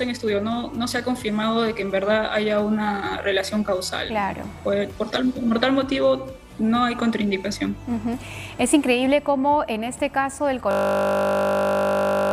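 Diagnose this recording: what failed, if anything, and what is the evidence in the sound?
A system hang loop struck the driver or buffer stage at 10.71 s and runs to the end. The sound collapses into a steady 50 Hz buzz. One 20 ms slice repeats exactly, about 80 times. The system froze while the hardware kept replaying its ring buffer.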